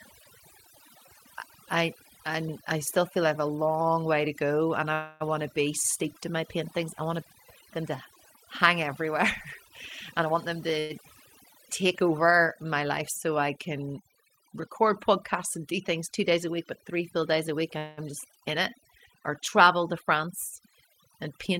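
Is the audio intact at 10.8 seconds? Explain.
No. At 10.8 s the speech stops moving forward: from 10.79 to 10.92 s the last sound is stretched into a fading buzz or hiss lasting about 104 ms, with no dead silence. This is a call audio freeze, likely caused by packets held up in transit so the jitter buffer ran empty and the receiver filled the wait. When the audio resumes it picks up exactly where it paused, so nothing is lost, but the stream now runs 104 ms later.

Just before that, from 10.12 to 10.79 s, the speech sounds hurried while keeping its pitch, playing at 125% speed. This is a jitter buffer speed-up: with more audio queued than the buffer aims to hold, the receiver trimmed many short pitch-period-sized slices in a row, around 150 ms in total, to shrink the delay. It ends right at the start of the freeze.

Underneath both, and through the whole clip, there is overdone noise removal. 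The background is pushed far down and breaks into twinkling, warbling specks, because the reducer switches individual frequency bands off whenever they sit near its noise estimate. Quiet parts of the speech that fall into those bands are cut along with the noise.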